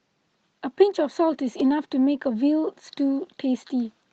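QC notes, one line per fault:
The speech carries the ordinary coding texture of a call path with content reaching up to about 8 kHz, which fits a wideband Opus stream at a moderate bitrate near 32 kbps, and nothing in the signal departs from that.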